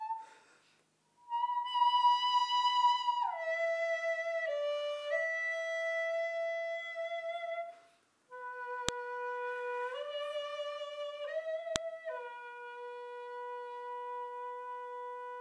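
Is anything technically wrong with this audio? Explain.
Yes. A sharp, loud click snaps out at 8.89 s and again at 11.76 s, each one instantaneous and cutting across the sound regardless of what it is doing. These are a file header played as audio: the clip is built from separate WAV pieces joined or streamed without stripping their headers, so the few dozen bytes of header data at the start of each new piece are read as sample values and burst out as a brief, loud transient.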